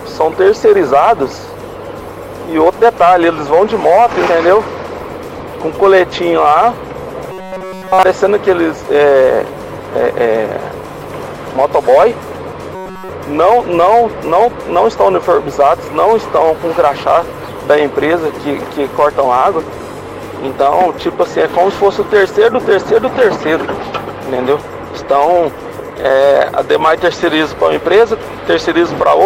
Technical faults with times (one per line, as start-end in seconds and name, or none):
7.32-8.03 robotic sound from repeated short buffers
12.75-13.09 robotic sound from repeated short buffers